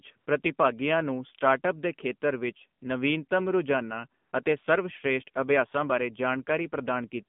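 It's a speech recording pushed through the AMR narrowband mobile codec, and the damage is plainly audible. Everything sits in a phone-line band of roughly 150 Hz to 3.5 kHz with nothing above, and the voice has that buzzy, synthetic edge you get when a vocal-tract model is rebuilt from very few pulses per subframe. That points to one of the low AMR-NB modes, around 7.4 kbps. You'll also hear AMR comfort noise in three short gaps where the phone stopped sending speech frames and the receiver patched in smooth synthetic hiss. The first runs from 0.18 to 0.26 s (80 ms), just before "ਪ੍ਰਤੀਭਾਗੀਆਂ ਨੂੰ ਸਟਾਰਟਅੱਪਸ ਦੇ". The second is from 4.22 to 4.32 s (100 ms), and the third is a brief 4.44 to 4.46 s blip (20 ms). At each one the real background switches out for that steady fill and then snaps back.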